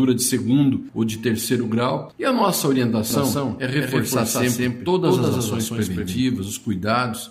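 From 3.10 to 6.24 s there's a doubled audio track: a second full-band copy trails the original by about a fifth of a second at roughly equal level, with no decay or room colour. It likely comes from a slower capture path, and it cuts in and out abruptly.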